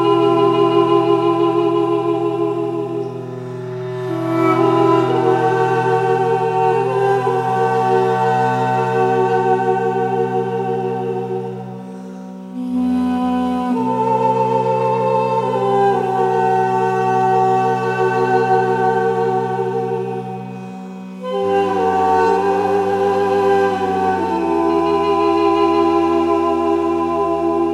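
Nothing here stands out as a technical fault; the sound just carries on steadily with nothing going wrong along the way.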